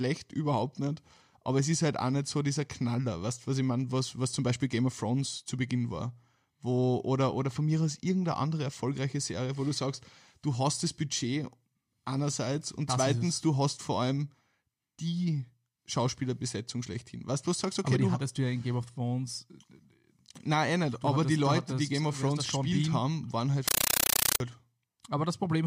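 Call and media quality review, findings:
Loud chattering static 23.68–24.40 s, after "haben waren halt": compressed stream played as audio, 9.3 ms bursts at 31 Hz, fits undecoded AC-3 passthrough.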